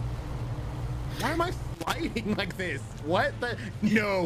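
A brief irregular burst of crackle and scratching breaks into the sound from 1.74 to 1.94 s, a little under 0.2 s. This is loose connector crackle: a worn or dirty contact making and breaking rapidly as it shifts, chopping the signal into ragged fragments.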